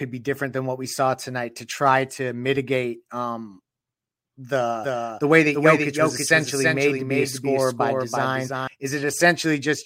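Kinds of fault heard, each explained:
Doubled audio track: the speech is likely captured a second time through a slower path, so a dry, full-band copy trails the original by about 300 ms at roughly 5 dB lower, switching in abruptly near 4.8 s and out near 8.7 s.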